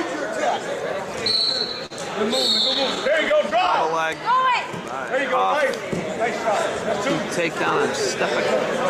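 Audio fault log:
1.31–1.93 s, repeated stalls (stutter): packets kept reaching the receiver late, so its jitter buffer ran dry four times and it stretched the last sound to cover each wait. The four fills total 68 ms, the longest 41 ms, and nothing is lost, but the audio drags and stutters.
2.74–3.71 s, scattered short gaps: around seven isolated packets arrived late or went missing, and the receiver papered over each hole by extending the preceding sound. The patches total roughly 50 ms, none much beyond 10 ms, and nothing is lost, so the gaps come through as brief ticks and smears between clear stretches.
4.33–5.59 s, jitter buffer slow-down: the buffer needed to build up reserve, so the receiver repeated short pieces of the signal many times over, adding 60 ms. The passage therefore plays at 96% speed with its pitch unchanged, sounding drawn out.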